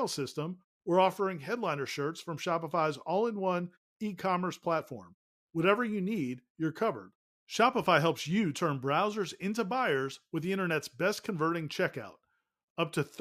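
No technical faults can be heard anywhere in this speech clip. In the pauses the output fades to silence and the background drops away, then it comes back in time for the next phrase without clipping its start.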